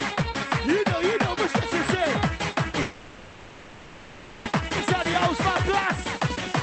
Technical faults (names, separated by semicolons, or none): long network dropout; jitter buffer speed-up